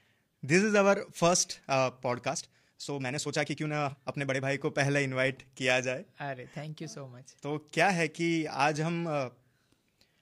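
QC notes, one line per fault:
2.25–4.47 s, time-stretched section: the speech suddenly runs about 1.47 times faster while its pitch stays unchanged, then returns to normal pace. This is likely software squeezing the passage to fit a shorter length by dropping short pieces of audio.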